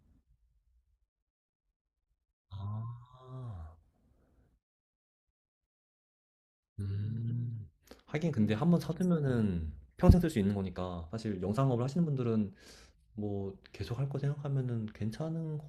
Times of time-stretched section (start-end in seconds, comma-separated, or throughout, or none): 10.01-13.35